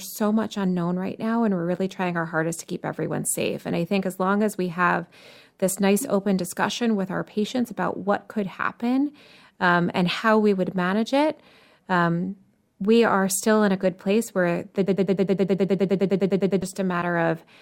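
At 14.87 s, right after "good place where the", the speech locks into a stuttering buzz: a fragment about 0.10 s long repeats exactly, back to back, 17 times until 16.62 s. This is a broken-record loop. The likely cause is a stall in the player, encoder or stream, which kept resending the last fragment it held, so the speech that belonged in those 1.76 seconds is lost rather than delayed.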